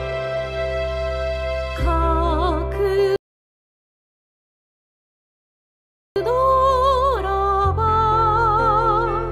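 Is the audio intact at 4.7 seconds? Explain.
No. At 4.7 s the sound is halted by a rebuffering stall running from 3.16 to 6.16 s: the player ran out of downloaded audio and waited about 3 s in silence. Unlike a dropout, nothing is skipped; playback resumes exactly where it stopped.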